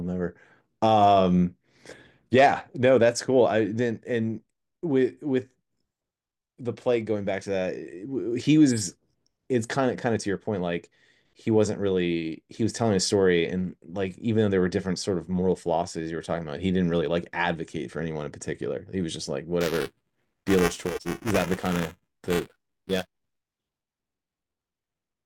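Speech, with buffer tearing from 19.6 s to the end. A 375 Hz robotic buzz fits a 128-sample buffer. Each period splices in a small slice of audio about 10 ms stale.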